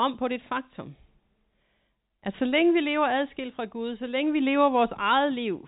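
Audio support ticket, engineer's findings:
No fault found; speech sits in a telephone band topping out near 4 kHz with only faint level-tracking quantisation noise, consistent with ordinary G.711 mu-law telephone coding.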